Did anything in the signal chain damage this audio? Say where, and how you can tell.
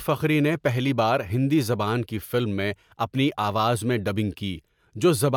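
No, nothing stood out on listening that would point to damage anywhere in the signal chain.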